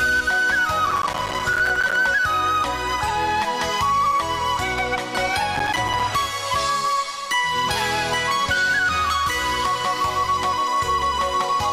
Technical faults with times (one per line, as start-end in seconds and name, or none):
0.86-1.96 processor overload crackle
5.55-6.03 processor overload crackle